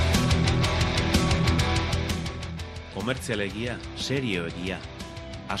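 Compressed frames skipped at 1.57 s and 2.93 s: missing or rejected frames make the audio jump ahead roughly 50 and 100 ms.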